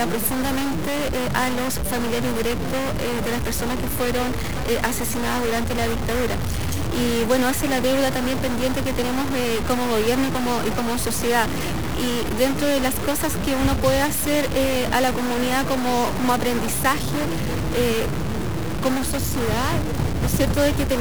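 Across the whole 21 seconds the audio carries a harsh, buzzy distortion that never lets up, and the gaps between louder passages fill with a steady hiss rather than falling silent. This points to a stuck bit, likely a single data line or converter bit frozen at one value. Roughly half the samples get pushed by that bit's weight, around -25 dBFS, in a pattern that follows the waveform. On a waveform view the trace shows small square offsets and a raised floor where quiet passages should be. On a spectrogram broadband energy smears across all frequencies, including the pauses.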